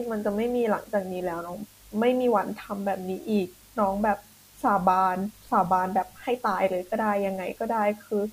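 From start to finish the speech sits on a constant, even hiss, roughly 30 dB below the voice, which points to low bit depth with dither at about 8 bits. Noise was added before each sample was rounded, so the rounding error became plain white noise rather than distortion. Unlike undithered truncation, the hiss stays level through pauses and never turns gritty or follows the voice.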